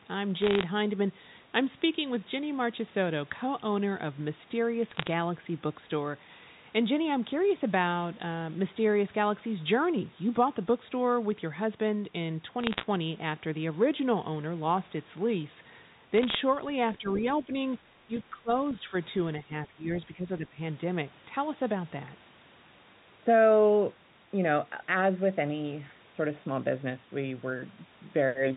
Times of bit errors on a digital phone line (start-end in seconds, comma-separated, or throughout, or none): 0.42-0.63, 4.90-5.10, 12.61-12.85, 16.14-16.35